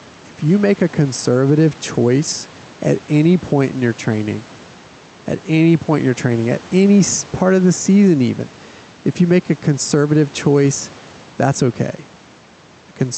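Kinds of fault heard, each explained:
Gain pumping: the level swings roughly 5 dB, likely from excessive gain with a fast limiter clamping it. Unlike a noise gate, the background never cuts to silence.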